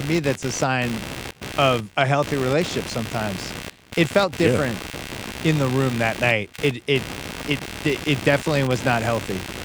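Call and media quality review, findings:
Computer activity noise, present throughout the speech clip. Processor, GPU or mouse load shifting the shared ground of the audio circuit. Symptom: buzzing pulsed at around 70 Hz, roughly 10 dB below the speech, following machine activity rather than the talker.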